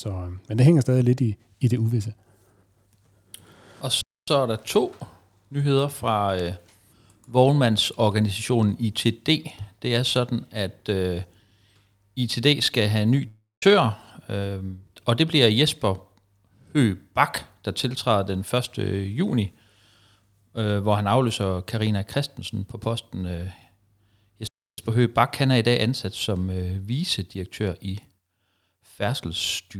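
At 4.01 s the player likely ran short of data, a playback stall: the speech cuts out for about 0.26 s, then resumes at "er der to nyheder". After "skal have en" at 13.27 s, a long network dropout likely left about 0.35 s of audio undelivered; the receiver stretches the last sound into a fading buzz, about 0.18 s of silence follows, and the speech returns at 13.63 s with that stretch lost. At 24.47 s a second playback stall likely occurred, halting the speech for about 0.3 s before it continues.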